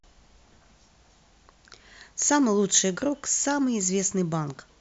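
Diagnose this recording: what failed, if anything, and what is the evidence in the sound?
Listening closely to the speech, nothing stood out at any stage of the chain.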